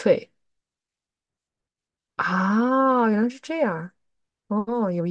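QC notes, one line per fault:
No fault noted.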